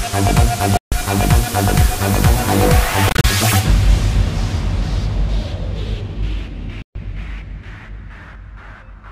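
The sound goes silent three times: from 0.77 to 0.92 s (about 145 ms lost), from 3.09 to 3.24 s, where 87 ms drops out in short gaps no longer than 29 ms, and from 6.82 to 6.95 s (about 131 ms). These are likely Bluetooth dropouts, with packets reaching the headphones too late and being discarded. Unlike a pause or stall, playback resumes further along, as if the sound had kept playing through the gap.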